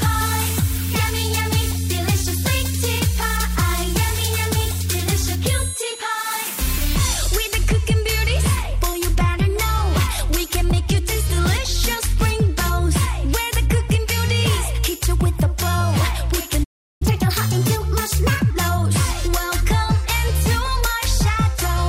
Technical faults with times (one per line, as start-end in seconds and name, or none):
16.63-17.02 playback stall
17.02-18.50 catch-up at higher speed